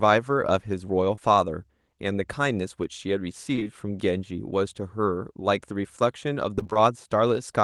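At 1.15 s there is a short concealed packet loss. About 20 ms of the stream, which fits a single 20 ms packet, arrived too late, and the decoder bridged it by extending the preceding sound. It comes through as a quick smear or wobble. From 3.55 to 3.67 s the same fault strikes three times back to back. That makes one continuous patch of roughly 0.12 s, heard as a single longer wobble. There is no real audio between the patches.

From 6.55 to 6.77 s the problem becomes repeated packet loss, giving a robotic sound. Six gaps of about 20 ms each, the longest 21 ms, fall so close together that nearly half of this 0.22 s stretch is synthesised fill. Unlike the earlier isolated or contiguous patches, real and concealed fragments alternate rapidly here. That alternation is what gives the stretch its choppy, broken texture.

Throughout, the call path's upper limit is around 12 kHz.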